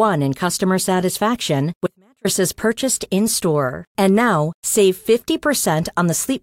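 An audio dropout to a faint residue runs from 1.87 to 2.25 s, removing about 0.38 s of the speech. The level falls abruptly, not like a natural pause or fade, and the gap keeps only a faint trace of the signal, roughly 35 dB below its normal level, before the speech snaps back mid-flow. The likely cause is a brief break in the signal feed while the path downstream stayed live, letting only leakage through.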